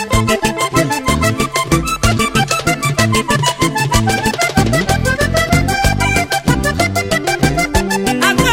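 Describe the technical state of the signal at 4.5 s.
At 4.5 s the signal is intact, with no audible dropout, distortion or other technical fault at that moment.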